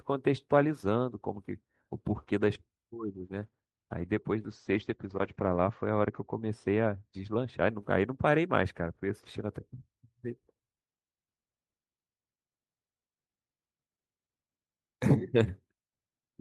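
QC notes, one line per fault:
2.96–7.64 s, channel delay (comb filtering): one channel lags the other by roughly 0.04 ms, which fits a delay of about two samples. When the channels are summed to mono, shared content cancels around 10 kHz, leaving the speech dull at the top.
4.5–6.31 s, call bitrate drop: the Opus rate falls from 40 to 11 kbps and stays at its lowest for 1.2 s, while bandwidth narrows from 20 kHz to 8 kHz. The coarser coding makes the speech rough and watery, and the lost highs muffle it.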